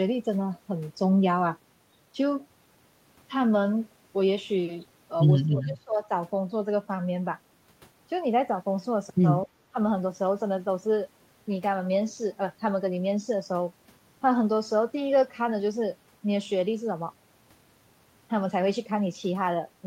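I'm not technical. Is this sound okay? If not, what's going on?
No. The speech briefly drops out three times. From 5.49 to 6.09 s it sinks sharply for about half a second. Two tiny dips follow, at 9.46 to 9.50 s and 9.72 to 9.77 s. This is speech suppressed in double talk, likely caused by both sides talking at once. The echo-cancelling system could not tell this talker from the other side's sound, so it turned both down.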